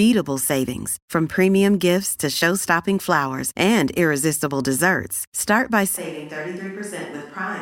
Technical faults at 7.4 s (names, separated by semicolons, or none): switch to a distant microphone